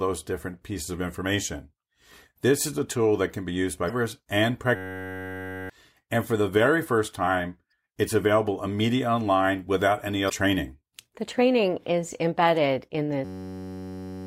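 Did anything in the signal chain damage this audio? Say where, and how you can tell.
Yes. At the codec stage, damaged data in the compressed stream causes short glitches at 3.86 s after "that can be used", at 7.70 s after "the very first time", and at 10.26 s after "immediately online without any". The decoder misreads corrupted frames, loses sync and jumps to the next valid header.

At the driver and buffer stage, a system hang loop produces a steady buzz from 4.76 to 5.70 s and from 13.25 s to the end. A 10.67 ms segment repeats at 93.8 Hz, which fits a 512-sample ring buffer cycling while the system froze, and about a second of sound is lost each time.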